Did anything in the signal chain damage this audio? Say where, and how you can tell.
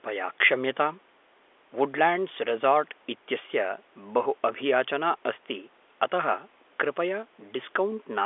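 No, nothing in the chain damaged this speech; it sounds like an ordinary phone call, with the narrow telephone band of roughly 300 Hz to 3.5 kHz that G.711 coding gives after the call's microphone processing.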